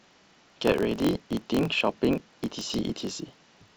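From start to finish the speech carries a low buzz at 45.9 Hz and runs 1.07 times normal speed, yet its timbre stays. That pairing marks a block size mismatch (truncated). One stage passes on longer blocks than the next stage reads, and the tail of every block is discarded. The buzz sits at the block rate, which fits 1024-sample blocks, and the dropped tails shorten the speech.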